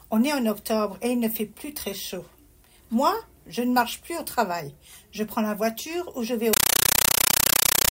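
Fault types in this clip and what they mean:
Compressed stream played as audio: from 6.53 s, an undecoded AC-3 bitstream is played as samples, giving loud chattering static, 9.33 ms bursts at 31.25 Hz.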